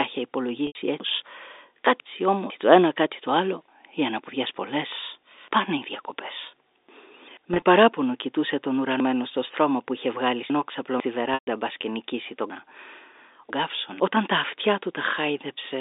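Speech carried over a G.711 telephone line, band-limited to about 300 Hz to 3.7 kHz. Packet loss with pitch repetition occurs at 0.67 s (80 ms), 7.54 s just before "κοιτούσε τον" (50 ms scattered, which fits 10 ms packets), and 11.34 s (130 ms). Each gap is bridged by a repeated pitch period that fades out, so the short scattered losses sound held and buzzy, while the longer ones fade into silence before the speech returns. Chunks out of order disrupt 1.0 to 2.5 s before "το ένα κάτι το", 9.0 to 11.0 s, and 12.5 to 14.0 s between "μπασκενικήσει τον" and "τα αυτιά". Half-second chunks play two or three places late, producing jumbled sound.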